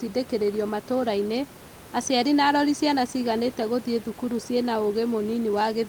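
No technical faults are audible.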